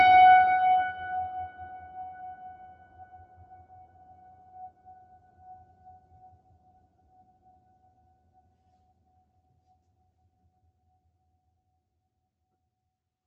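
All the way through the music there's a noise suppressor built for speech left running. It treats the sustained tones and reverb tails as noise and pulls them down by about 10 dB, so attacks punch through while held parts sink and the sound pumps and thins. The call path itself sits underneath, with the top end stopping at 8 kHz from the Opus settings used on this call.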